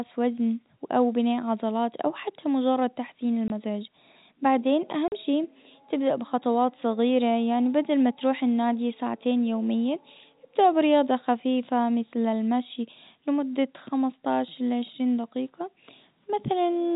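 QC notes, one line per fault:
3.48–3.50 s, packet loss filled with silence: a 20 ms hole opens right after "او حتى مجرد تحسين", with hard edges. The gap length fits one lost 20 ms packet that the receiver replaced with silence.
5.08–5.12 s, packet loss filled with silence: a 40 ms dropout just before "شي تبدأ بخطوات", again with hard edges. It is twice the first gap, which suggests two consecutive 20 ms packets lost, on a G.711 A-law telephone path band-limited below 4 kHz.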